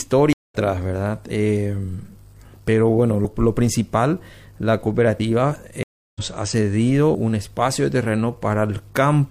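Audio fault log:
0.33–0.55 s and 5.83–6.21 s, stream reconnect: the sound drops out for about 0.17 s, then for about 0.32 s, and each time picks up slightly ahead of where it stopped, skipping roughly 0.15 s and 0.2 s of material. The connection broke, the player sat silent while it re-established the link, and a fresh decoder started in mid-stream at the live point, so the gap is followed by a jump forward rather than a clean resume.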